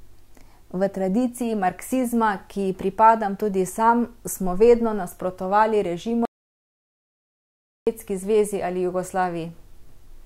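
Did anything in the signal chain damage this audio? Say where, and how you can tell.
Yes. There's an audio dropout to silence in the speech from 6.25 to 7.87 s: right after "sam smo vedno nasprotovali" everything cuts to silence, with no room tone at all, and it snaps back in mid-flow at "zvezi ali". That's about 1.6 s of material simply gone. The stage is likely the input side, a device or link briefly dropping out while the recorder kept writing silence rather than stopping.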